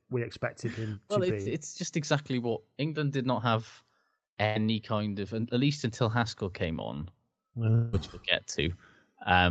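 Just after "him well to it's", at 1.41 to 1.48 s, short concealed packet loss leaves a quick smear: about 40 ms went missing and was bridged by continuing the preceding sound, too brief to become a held tone.

At 4.46 to 4.57 s, just before "kind of at least", a burst of packet loss lasts longer: 100 ms is replaced by a held, fading continuation, and the audio resumes with that span gone.

From 7.75 to 7.95 s, just before "we'll get", about 180 ms is replaced by a continuation that fades without reaching silence. This is likely a long network dropout, distinguished from the burst by its length.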